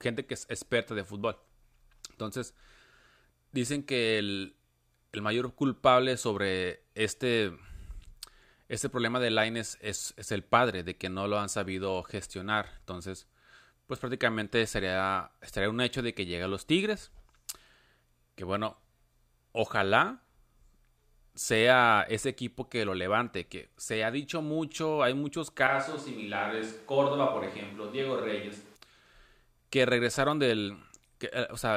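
The close microphone likely dropped out from 25.67 to 28.76 s, so a distant one carries the speech: abruptly roomy and hollow, thinner, about 5 dB quieter, with more background noise.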